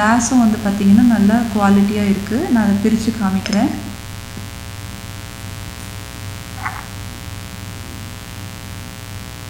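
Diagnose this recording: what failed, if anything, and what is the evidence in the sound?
The analogue wiring let interference from the 60 Hz mains supply into the signal path, most likely through a dimmer, rectifier or missing shield that injects sharp switching spikes twice per mains cycle. The result is a mains buzz that runs steadily from start to finish, a raspy tone built from 60 Hz harmonics stretching up to several kHz and sitting roughly 15 dB below the wanted sound.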